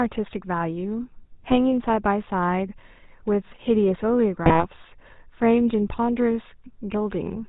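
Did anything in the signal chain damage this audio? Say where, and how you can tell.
Yes. The codec stage is the culprit throughout: this speech has the buzzy, gravelly roughness of the GSM full-rate codec, with nothing above 4 kHz. The vocal tract is modelled and driven by sparse regular pulses, which fits 13 kbps full rate.

Then there are GSM bit errors from the radio link, at 1.46 to 1.57 s and 4.44 to 4.66 s: brief squawks and gargling. Flipped bits corrupted the filter, pitch or gain values, and each burst sounds like roughly five frames going wrong.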